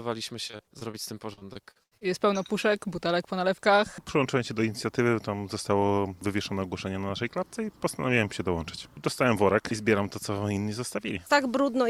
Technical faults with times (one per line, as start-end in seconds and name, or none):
0.47-0.95 repeated packet loss (robotic sound)
1.33-2.03 repeated packet loss (robotic sound)